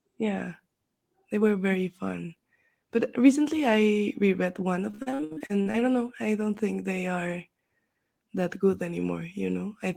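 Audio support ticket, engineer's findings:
Repeated packet loss (robotic sound), 4.91–5.83 s, between "recently I reread one" and "don't know I don't". Choppy speech with pieces missing. Probable component: network jitter buffer and concealment. There are 13 gaps, the longest 64 ms. About 44% of the span is patched by extending prior audio (401 ms filled, 340 ms missing). On the spectrogram, the harmonics are smeared into repeated flat frames with hard vertical edges. On the waveform, the envelope is chopped, with looped periodic segments.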